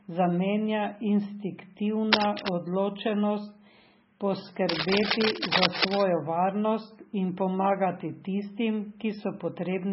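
Speech, heavily smeared and watery throughout, with nothing above 5.6 kHz. That is likely MP3 compression at a very low bitrate, around 16 kbps, and on a spectrogram it shows as a flat ceiling with speckled, flickering gaps below it. Cable scratch noise, likely a worn connector being moved, adds dense rustling bursts roughly as loud as the speech from 2.11 to 2.54 s and from 4.69 to 6.01 s, just before "varnost in pomagati tistim". Both show as ragged broadband blotches on a spectrogram and jagged spikes in the waveform.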